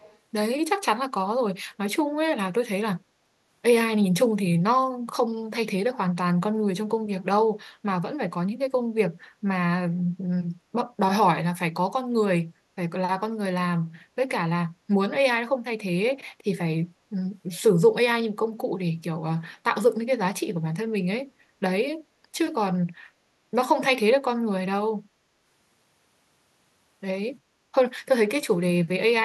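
From 0.00 to 0.18 s, at the very start of the speech, a faint delayed copy of the talker is audible about 352 ms behind the original, sitting roughly 30 dB below it. This is an echo leak. The likely cause is a far end playing the call through a loudspeaker, where the echo canceller failed to fully subtract what its microphone picked up, so a brief residual scrap was returned down the line.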